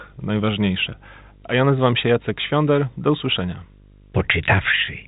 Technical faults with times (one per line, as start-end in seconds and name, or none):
0.00-5.07 video or display buzz